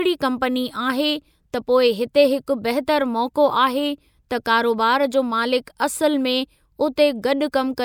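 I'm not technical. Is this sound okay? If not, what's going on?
Yes, no faults heard.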